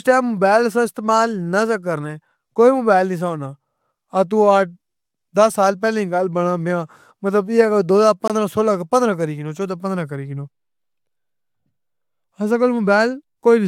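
A gap between stream segments at 8.28 to 8.30 s leaves about 21 ms of hard-edged silence just before "سولہ پندرہ کری کینو", as mistimed segments leave nothing to play.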